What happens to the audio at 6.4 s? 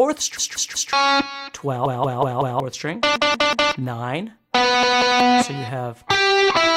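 Nothing goes wrong at 6.4 s; the audio runs through that moment intact, with no dropout, click or other fault.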